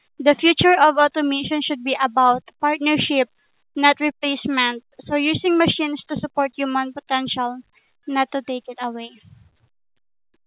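At 5.52 s there is a short concealed packet loss: about 20 ms never arrived, and the receiver extrapolated the preceding speech, leaving a brief smear through the narrowband, 4 kHz-limited call audio.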